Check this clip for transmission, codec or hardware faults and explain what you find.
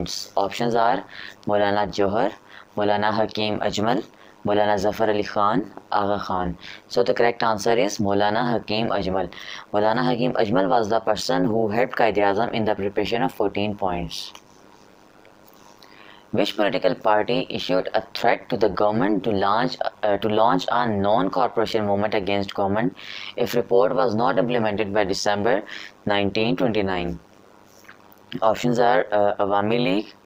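One fault runs through the whole clip: overlap-add ripple. Frames rejoined with mismatched overlap make the level swing by about 60 dB around 100 times a second, a metallic buzz with extra tones around each note, regular unlike random dropouts.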